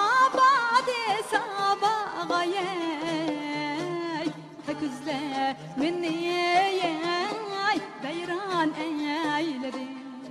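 Damaged data in the compressed stream at 4.67 s: corrupted bytes make the decoder misread a frame and resynchronise, leaving a brief glitch.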